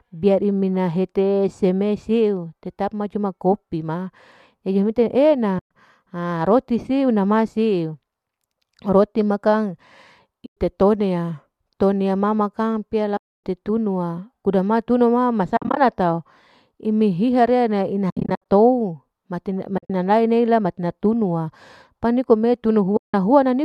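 AAC frame loss with muting leaves soft-faded holes of about 0.1 to 0.27 s at 5.59, 10.46, 13.17, 15.57, 18.10, 19.78 and 22.97 s, where the decoder zeroed missing frames. Those at 15.57, 18.10 and 19.78 s are broken into several short dropouts.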